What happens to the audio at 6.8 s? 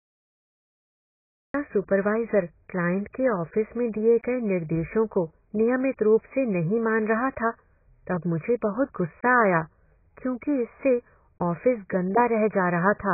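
The speech at 6.8 s, as everywhere in the clip, is dull and muffled with a warbling, smeared texture, most likely from heavy AAC compression. The encoder appears to be AAC-LC at a very low bitrate, around 12 kbps. To save bits it discards everything above 2.5 kHz and coarsely quantises what remains. On a spectrogram there is a flat ceiling at 2.5 kHz with patchy gaps beneath it, while the waveform looks largely unchanged.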